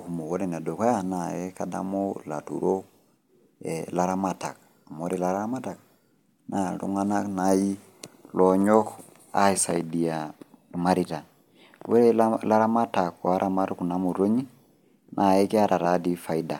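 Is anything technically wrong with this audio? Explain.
No, the speech signal holds steady throughout, with nothing in it that points to a technical problem.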